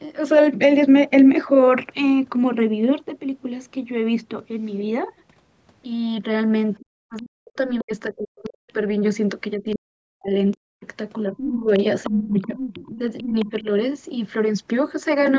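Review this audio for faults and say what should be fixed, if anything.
Speech suppressed in double talk at 6.8–8.7 s and 9.55–13.66 s: the speech dips by up to about 40 dB, likely because the echo canceller muted both talkers at once. Unlike a network dropout, it happens only while the other side talks.

The other side's voice leaks through at 7.16, 8.44–8.73, 9.71, 10.51 and 11.37–13.51 s, about 25–35 dB below the speech and only about 10 dB below in the last stretch. This is likely residual loudspeaker echo, and unlike reverb, it is a different voice.

Prevent both with a better-tuned echo canceller that has proper double-talk detection, or by using a headset so the loudspeaker doesn't reach the microphone.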